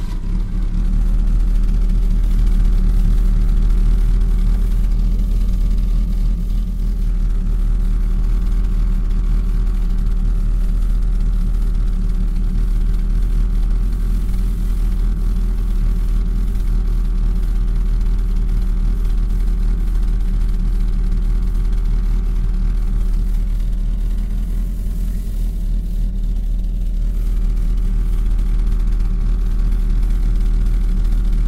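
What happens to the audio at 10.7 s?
Nothing goes wrong at 10.7 s; the audio plays through that moment intact, with no dropout, click or distortion.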